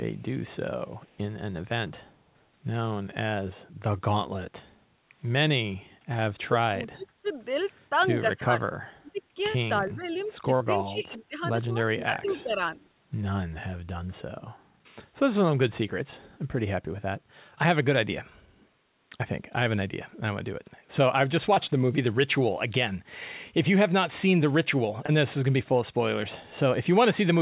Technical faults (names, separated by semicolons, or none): echo leak; short concealed packet loss; speech suppressed in double talk